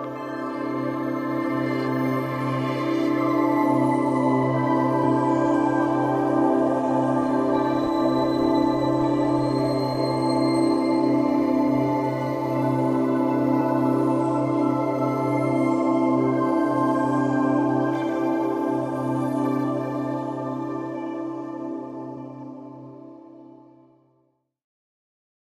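At 5.03, 13.6 and 22.16 s, compressed frames are skipped: a few whole frames never play, so the sound jumps ahead by roughly a tenth of a second, a little less the last time. Each join is a jump past the missing audio, unlike a dropout's silent gap.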